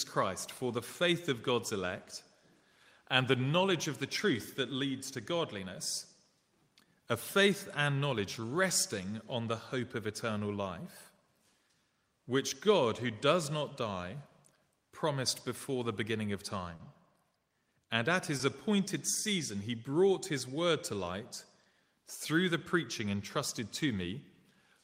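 Short stalls from a late packet occur at 16.75–16.81 s and 18.37–18.41 s. Each time a packet missed its slot, the jitter buffer ran dry and the last sound was stretched, by 40 ms then 20 ms, before resuming unbroken. The held sound carries a faint buzz or dip.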